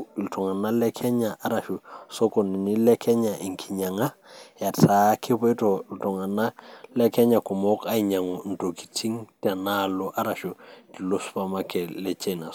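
No audible faults: no dropouts, glitches or discontinuities anywhere in the recording.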